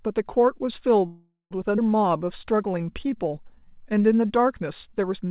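From 1.06 to 1.53 s the sound stalls into a fading buzz that ends in about 170 ms of silence, then resumes: a call audio freeze, likely from delayed packets emptying the jitter buffer.

At 1.77 to 1.80 s playback skips ahead, abruptly joining two points with roughly a fifth of a second of audio dropped between them.

From 2.02 to 4.03 s the sound drags at 90% speed with unchanged pitch, stretched by 211 ms. This is a jitter buffer slow-down, repeating pitch periods to rebuild its reserve.

Throughout, nothing is heard above 4 kHz, consistent with G.711 mu-law call audio.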